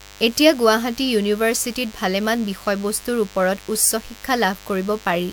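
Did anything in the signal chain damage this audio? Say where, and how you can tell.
Yes. A DECT cordless phone buzz runs through the whole speech clip, entering in the analogue wiring or input circuitry. It is a thin, steady buzz at a 100 Hz repetition rate, roughly 25 dB below the speech. A nearby DECT handset or base transmits a radio burst every 10 ms, and the audio circuit rectifies it into a pulse train. Unlike mains hum, whose energy sits in a few low harmonics, this buzz has many harmonics, giving it a buzzy rather than rounded tone.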